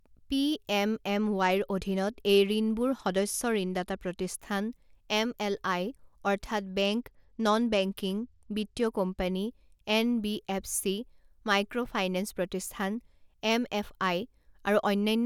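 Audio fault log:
1.13–4.30 s and 6.70–9.21 s (the second just after "এমএলআই অৰ্থাৎ"): Bluetooth SBC bit pool drop. The treble dulls and gritty noise rises, which fits the bit pool falling from 31 to 15, near 105 kbps.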